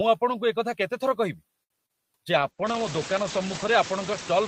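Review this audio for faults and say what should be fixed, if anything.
The noise suppressor works throughout, cutting steady background by about 19 dB frame by frame, so the noise sinks between the words and rises under them. The room noise rises by about 21 dB near 2.5 s.

A short stall from a late packet occurs at 1.63 to 1.72 s. The jitter buffer ran dry, and the receiver stretched the last sound for 68 ms until the packet arrived. Nothing is lost, but the sound hangs with a slight buzz or dip.

Short concealed packet loss follows at 1.86 to 1.91 s. About 60 ms of audio never reached the decoder, and 31 ms of continued sound smears over the gap, which briefly wobbles.

A jitter buffer slow-down runs from 2.24 to 2.72 s. To rebuild its reserve, the receiver repeated pitch periods, adding 39 ms. The audio plays at 93% speed without changing pitch, so sounds are drawn out.

A call bitrate drop starts at 2.34 s and lasts to the end. 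The bandwidth estimate fell and the encoder went from 32 to 10 kbps, staying lowest for 1.54 s. The audio band narrows from 20 kHz to 8 kHz, leaving the sound muffled and rough.

To prevent these, stabilise the network path, give the jitter buffer more headroom, and ease the suppressor's strength so it cuts less deeply in heavy noise.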